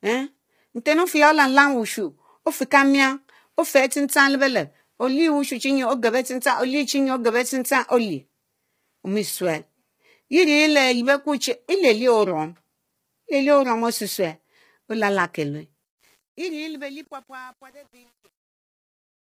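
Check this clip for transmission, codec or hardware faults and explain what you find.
Two faults are audible. The speech is rough and grainy throughout, and its closing fade turns gritty.

Low-delay AAC compression: the likely cause is an AAC-ELD encoder running short frames with too few bits, which fits roughly 24 kbps. Pitch harmonics are poorly resolved, so noise fills the gaps between them and the top band sounds thin and synthetic.

Truncation distortion on a fade: the volume stage keeps only about 9 bits and adds no dither. The fade out, which starts at 15.84 s and ends at 19.3 s, turns gritty from 15.84 s. From 16.38 s the fade is at its worst as the waveform collapses into a few coarse steps.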